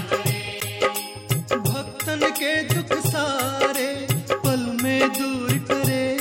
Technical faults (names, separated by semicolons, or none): corrupt frame decoded